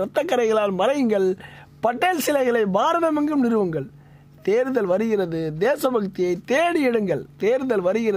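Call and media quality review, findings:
Nothing to flag on this one; no dropouts, glitches or level problems turned up anywhere in the clip.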